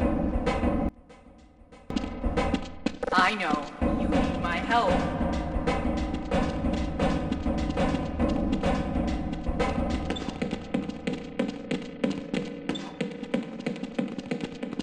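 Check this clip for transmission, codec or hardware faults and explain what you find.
One fault appears. From 0.89 to 1.90 s the sound nearly vanishes, leaving only a residue about 24 dB down. The likely cause is one channel inverted: with reversed polarity, everything the two channels share cancels when summed to mono. The waveform collapses over that stretch, and the spectrogram shows a fainter band across the whole frequency range.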